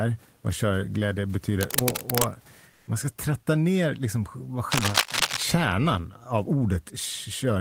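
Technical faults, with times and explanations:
1.59–2.29 s and 4.72–5.43 s, cable scratch noise: dense, uneven bursts of scratching, roughly as loud as the speech, after "vad körglädje" and after "tratta ner liksom vad". These are likely from a worn cable or connector being moved, making its contact resistance jump rapidly. Unlike the steady room noise, they come and go with a gritty, irregular texture.
2.71–2.87 s, comfort noise in place of the background: for 160 ms just before "man ska tratta ner", the real room background, about 36 dB below the loud speech, becomes a smooth, featureless hiss about 1 dB quieter. This is likely discontinuous transmission, as in Opus DTX, filling the pause with synthetic noise. The pause is filled, not silent as in a dropout.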